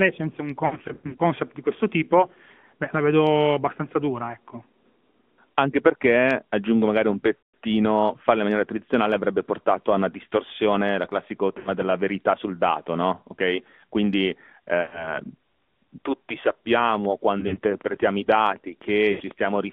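AMR narrowband mobile codec coding runs through this whole speech recording. The line is confined to roughly 150 Hz to 3.5 kHz, with nothing above 4 kHz surviving the 8 kHz sampling. The vocal-tract model, excited by sparse pulses, leaves the voice plainly buzzy and synthetic, which fits a mid-rate mode around 10.2 kbps. Lost AMR speech frames break in six times: 0.66–1.21 s, 7.41–7.54 s, 11.58–11.69 s, 14.82–15.18 s, 17.40–17.59 s and 19.12–19.22 s. In each case the decoder stretches the last good pitch and spectral settings while fading the gain. The first, between "senza un" and "di questo tipo", is a chain of short warbly dropouts scattered over about half a second, none longer than 60 ms. The one after "perché aggiungo magari un" is a single 160 ms smear that sags toward silence. After "una distorsione il classico", an 80 ms gap blurs into "della verità sul dato". The later three are brief dips of about 80 to 100 ms, the 17.4 s one split into short bursts.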